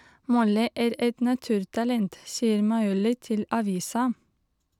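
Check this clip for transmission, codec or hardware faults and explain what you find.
Checking this speech clip turned up no faults to explain.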